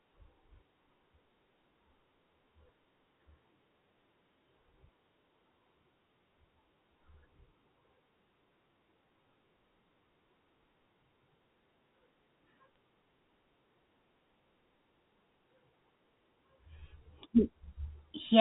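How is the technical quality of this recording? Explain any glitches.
The recording is telephone-band speech over G.711 coding, so nothing extends above 4 kHz, and it has one brief glitch. From 12.74 to 12.78 s, bit errors on a digital phone line flip a tiny fraction of bits. Each flip corrupts one logarithmic sample, and hits on sign or high bits produce sharp ticks over the speech. A waveform shows isolated single-sample spikes, and a spectrogram shows thin vertical streaks across the band.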